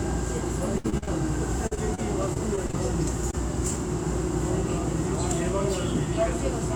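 Two stretches of repeated packet loss (robotic sound) make this audio choppy. From 0.78 to 1.09 s there are four gaps, the longest 60 ms, and nearly half of that span is filled with guessed sound. From 1.67 to 2.75 s there are seven shorter gaps, none over about 40 ms, covering roughly 15% of the span. Each time, the decoder extended the last frame it received to cover the missing one. On a spectrogram this shows as frozen, smeared bands with hard vertical edges. On the waveform it looks like copied, evenly repeating cycles where the texture should keep changing. A single short concealed packet loss between 3.31 and 3.35 s replaces about 20 ms with continued sound that blends back in, heard as a brief smear or wobble. It appears as a thin patch of blurred spectrum and a small glitch in the waveform envelope.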